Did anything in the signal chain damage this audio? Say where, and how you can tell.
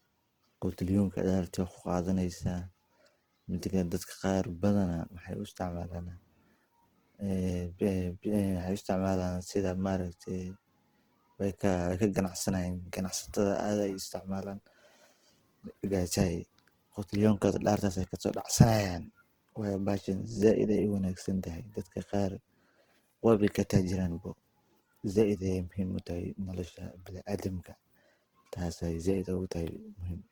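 Yes. Opus compression throughout, likely at the codec stage: full-band speech sounds grainy and rough rather than swirly, as starved bands get noise-filled, which fits about 16 kbps.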